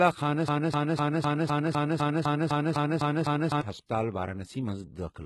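Right from the start the whole clip carries the sound of heavy HE-AAC compression, likely at a low rate, around 16 kbps. The treble above the coded band is rebuilt from copied lower bands, so the sibilants come out gritty and lispy, and nothing sits above 11.8 kHz.

Then from 0.48 to 3.61 s there's a broken-record loop. A fragment of about 0.25 s repeats back to back twelve times, likely because the player or stream stalled and kept resending its last chunk. Whatever should have played there is simply gone.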